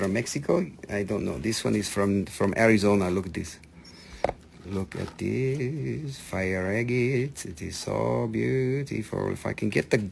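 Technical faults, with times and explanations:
Throughout, aliasing: content above 12 kHz folds back below that edge as gritty, unrelated tones about 20 dB under the signal, and the spectrum runs hard up to 12 kHz, which fits a drop to a 24 kHz rate without an anti-aliasing filter.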